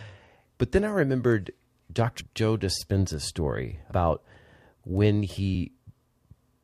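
From 0.17 s to 6.19 s, word clock ticks recur about every 0.7 s, roughly ten in all. The receiver's free-running clock, a few tens of parts per million off, slips one sample each time, leaving thin vertical spectrogram lines.

At 2.20 s and 3.90 s, compressed frames skipped jump the speech ahead about a tenth of a second.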